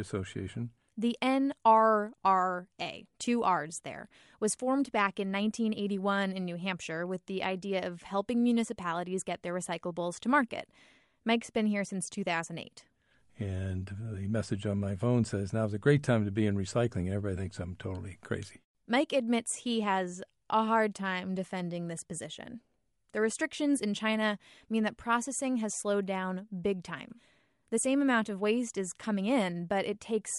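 Throughout the speech, a plainly audible grainy, breathy edge points likely to Bluetooth LC3 compression, fitting 48 kbps in 10 ms frames; spectrogram upper bands look speckled.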